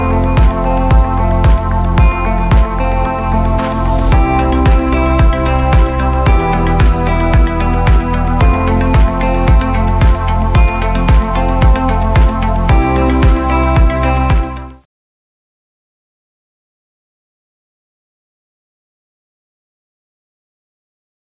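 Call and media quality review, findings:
No call or media quality findings; the smooth fade-out ending at 14.87 s and the narrowband call codec's cut-off at 4 kHz are expected behaviour.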